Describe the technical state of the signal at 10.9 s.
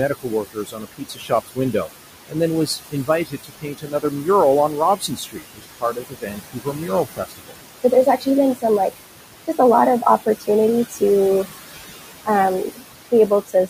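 At 10.9 s, the noise suppressor is cutting the steady room noise, which sits about 12 dB below the speech, by about 17 dB frame by frame, leaving noise suppressor artifacts: the noise sinks between the words and rises under them.

This moment also falls inside the span from 0.09 to 11.02 s where the suppressor misreads quiet speech as noise and pulls it down by as much as about 18 dB. This speech cut by the noise suppressor totals around four seconds, leaving soft consonants and word endings swallowed or faint.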